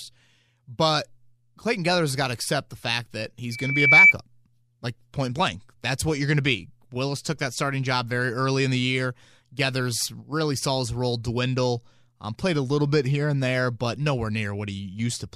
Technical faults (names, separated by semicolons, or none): loudspeaker feedback squeal